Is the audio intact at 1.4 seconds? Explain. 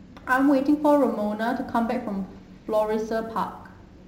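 No. At 1.4 seconds the speech carries sample clock jitter, which runs through the whole clip rather than starting or stopping there. The converter's clock wanders by several microseconds, so each sample is captured a little early or late. Where the waveform changes fast, that timing slip becomes an amplitude error, sitting roughly 30 dB below the signal. It sounds like a hiss or grain. It grows on loud and bright sounds and disappears in pauses.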